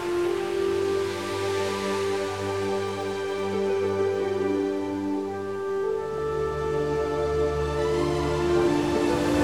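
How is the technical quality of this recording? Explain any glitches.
No glitches or faults heard.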